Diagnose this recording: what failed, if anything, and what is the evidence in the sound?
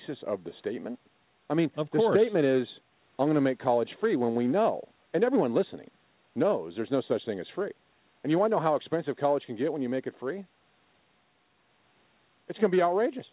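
Nothing failed in this recording, and the sound carries no evidence of a fault: the speech has the narrow, telephone-band character of a G.711 A-law call with nothing above 4 kHz, which is that codec working as intended.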